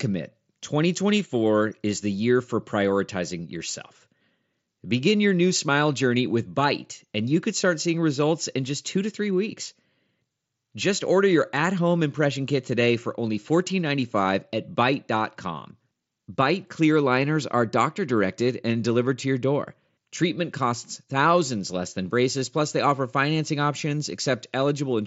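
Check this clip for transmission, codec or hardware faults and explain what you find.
Nothing stood out on listening to this speech, which comes across with the wideband, roughly 8 kHz-limited character of a Bluetooth mSBC headset link.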